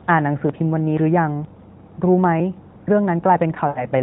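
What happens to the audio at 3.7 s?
At around 3.68 to 3.85 s there's a run of lost AMR speech frames, about 80 ms, which fits four 20 ms frames. The narrowband decoder keeps repeating its last good pitch and vocal tract settings at falling gain, so the speech smears out, fades, then returns a bit weak and rough.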